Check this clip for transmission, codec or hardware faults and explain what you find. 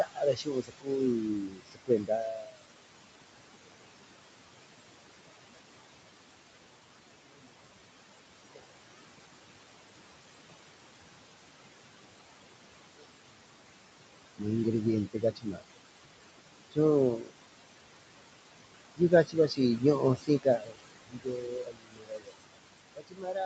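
Two faults come from the call's noise suppressor. Both follow from how it separates speech from background.

Noise suppressor artifacts run through the whole clip. The suppressor cuts about 21 dB from frequency bands it judges to be steady noise, frame by frame. The room noise, about 10 dB below the speech, sinks in the gaps and swells under the speech.

Speech cut by the noise suppressor occurs five times: 0.04 to 2.62 s, 8.54 to 8.64 s, 14.38 to 15.62 s, 16.71 to 17.44 s, and from 18.97 s to the end. The suppressor mistook quiet parts of the speech for noise and pulled them down by about 20 to 22 dB. Soft consonants and endings sound swallowed or faint, for about a second and a half in the first stretch.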